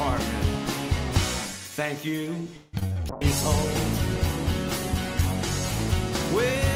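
Repeated packet loss (robotic sound) between 2.56 and 2.97 s chops the audio into a stutter, with four gaps patched by repeating prior sound (longest 167 ms), visible as smeared, repeated spectrogram blocks. From 3.11 to 5.85 s a call bitrate drop from 128 to 17 kbps leaves the audio watery and muffled, with the spectrogram's upper frequencies cut away.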